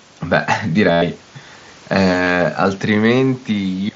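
Speech carried over an mSBC Bluetooth headset link shows concealed Bluetooth headset packet loss twice. From 0.92 to 1.02 s, about 100 ms is filled with a repeated recent waveform stretch, giving a steady buzzy tone and a slight warble on recovery. At 2.24 to 2.27 s, a 30 ms gap is patched the same way, with a shorter buzzy tone.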